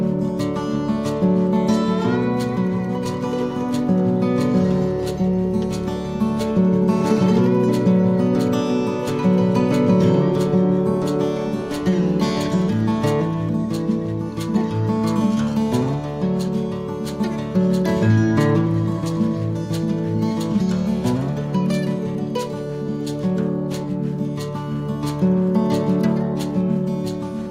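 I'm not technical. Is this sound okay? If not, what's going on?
Yes, nothing here needs fixing: no dropouts, glitches or distortion are audible at any point.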